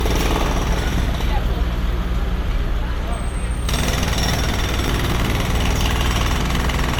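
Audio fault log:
Throughout: generation loss. The whole clip has a swirly, smeared, hollow character, and transients come out blurred rather than crisp. That's more damage than a single pass at this quality would leave, so it's likely repeated lossy coding, roughly three rounds of MP3 at something like 94 kbit/s. Each re-encode quantises on a shifted frame grid, so the noise and spectral holes stack up instead of staying put. Top end runs out at 20 kHz.
3.76 to 5.32 s: filter restarted on every block. Over this stretch there's a steady 50 Hz buzz riding on the sound, made of tiny regular ticks. A filter in the chain is dropping its memory at each block boundary and starting from silence, so every block opens with a small transient. At 50 a second that means blocks of about 20 ms, and the ticks fuse into a buzz that tracks how loud the sound is.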